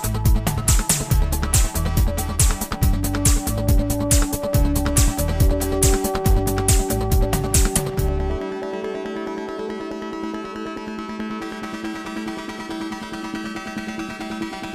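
No technical faults can be heard anywhere in this audio.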